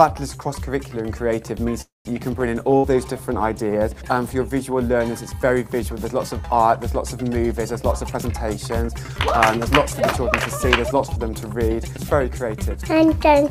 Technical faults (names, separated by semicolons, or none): call audio freeze; call bitrate drop; burst of packet loss; jitter buffer speed-up